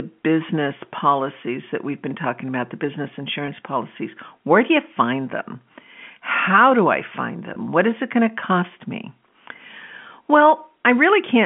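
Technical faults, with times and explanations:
3.46–3.48 s and 7.54–7.56 s, packet loss with pitch repetition: each time about 20 ms of audio goes missing, which fits a single lost packet. The receiver fills the hole by replaying the last pitch period it received, so rather than a click or a dropout, the sound briefly holds and turns slightly buzzy. The gaps are short enough that normal audio resumes before the repeated cycle fades much.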